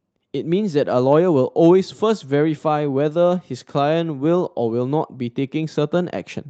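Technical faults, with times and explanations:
No technical faults can be heard in the speech. The call path is working as expected, with the audio band topping out around 8 kHz and the usual coding texture that points to an Opus stream at roughly 40 kbps.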